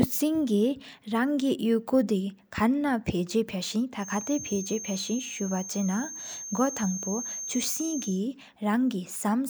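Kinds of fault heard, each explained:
Feedback whistle, 3.94 to 8.23 s: a thin, steady tone near 6.4 kHz sits behind the speech, roughly 10 dB under it and swelling and fading slowly in level, likely from a loudspeaker-to-microphone loop held just at the edge of feedback, ringing without building.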